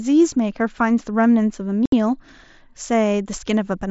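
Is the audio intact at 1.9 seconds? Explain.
No. From 1.86 to 1.93 s the speech drops into a hole of about 70 ms, with abrupt edges at both ends. This is unconcealed Bluetooth headset packet loss. Several consecutive packets on the mSBC wideband link between headset and phone never arrived, and nothing was synthesised to bridge the gap, so silence or an idle pattern took their place.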